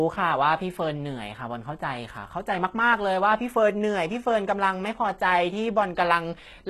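Throughout, HE-AAC compression likely synthesised the treble from copied lower bands, so s sounds turn gritty and metallic, and nothing remains above 12.3 kHz.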